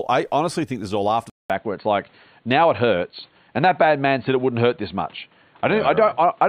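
At 1.30 s, right after "this is all after", a gap of about 200 ms opens, and from there to the end the speech is dull and boxy, with nothing above 4.4 kHz and a new background noise roughly 40 dB below the voice, while loudness stays about the same. The likely cause is the input switched to a poorer device mid-recording. The brief silence and fresh noise floor set it apart from a mere bandwidth or codec drop.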